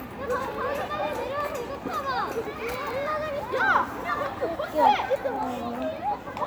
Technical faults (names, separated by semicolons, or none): none